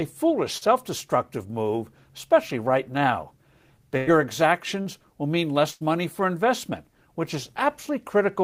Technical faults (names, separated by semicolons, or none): short concealed packet loss; burst of packet loss